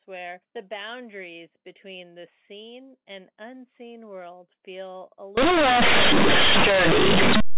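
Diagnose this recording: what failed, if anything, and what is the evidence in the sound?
Companded audio read as linear, a sample-format conversion fault: from 5.37 s, after "unseen world feel a", mu-law bytes play unexpanded, so each change of sign swings the waveform over about half its range and broadband buzz fills the spectrogram, even in pauses.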